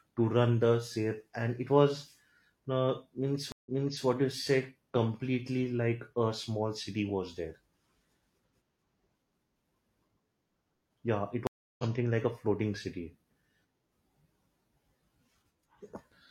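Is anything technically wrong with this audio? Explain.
Yes, there are two stream reconnects. Each time the connection dropped, and the player went quiet, reconnected and began decoding afresh mid-stream. At 3.52 s, after "uh means", about 140 ms of silence gives way to audio restarting 384 ms earlier, so a fragment repeats before "what you say", consistent with the server resending a burst. At 11.47 s a gap of about 320 ms ends with the stream rejoining roughly 0.3 s later, so some speech is skipped before "like a floating city".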